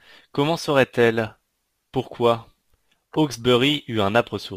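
Crude rate conversion throughout the speech: unfiltered dropped or repeated samples, suggesting a 48 to 44.1 kHz change, leave an inharmonic fizz about 30 dB down.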